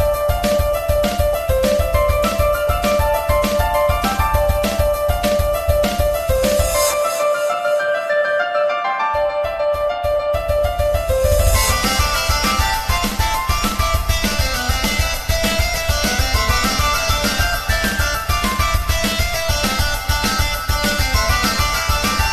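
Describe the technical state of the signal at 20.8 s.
At 20.8 s the audio is intact, with no technical fault in the signal at that moment.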